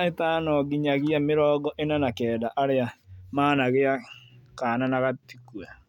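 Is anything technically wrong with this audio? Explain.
No, nothing technically wrong can be heard in this speech recording. The audio runs without any interruption or defect that would call for an explanation.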